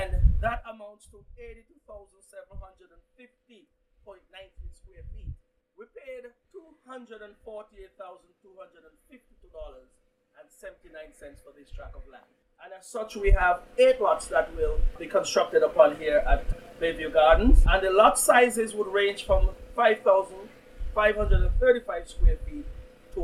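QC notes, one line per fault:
No faults heard anywhere in this clip.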